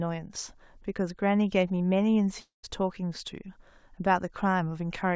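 At 2.40 to 2.65 s the speech gives way to a fading buzz, then about 140 ms of near-silence, and 240 ms never returns, likely a long network dropout. A spectrogram shows smeared, decaying bands ending in a blank gap beneath the call codec's 8 kHz ceiling.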